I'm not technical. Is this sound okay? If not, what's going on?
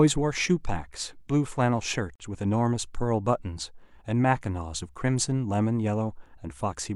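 No, there's one short gap. At about 2.16 to 2.24 seconds the speech briefly cuts to silence for around 43 milliseconds. That's a digital broadcast dropout: the receiver lost about one frame of the signal, muted, and skipped that bit.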